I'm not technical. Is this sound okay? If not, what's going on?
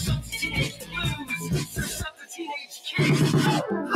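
No. Throughout the clip the level keeps rising and falling on its own: the start of each sound comes through, but anything held or fading sinks away, so the audio pumps and sounds thin. This is a noise suppressor applied to music or sounds. The tool was built to clean up talking, and here it mistakes steady tones and natural echo for background noise and keeps turning them down.

There are three spots where the sound is cut by the noise suppressor more than usual, each lasting about a quarter of a second: 0.69 to 0.95 seconds, 2.11 to 2.37 seconds, and 2.6 to 2.89 seconds. In each, the sound drops away noticeably, most of all in the second and third.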